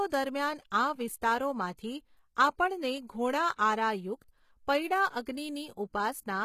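Speech whose upper register sounds synthetic throughout: s sounds come out gritty and lispy, the brightness feels pasted on, and nothing is present above 14.9 kHz. This is likely HE-AAC compression at a low bitrate, around 20 kbps, where spectral band replication rebuilds the treble from copied lower bands.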